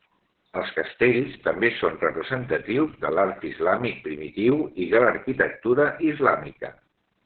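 From start to finish the speech carries heavy Opus voice compression damage. Nothing is present above 4.5 kHz, so the band is narrowband and the voice sounds muffled and telephone-like. The coder is running in its SILK linear-prediction mode and quantising the excitation very coarsely, which leaves the voice hoarse, buzzy and slightly robotic. This degree of damage points to a very low bitrate, around 6 kbps.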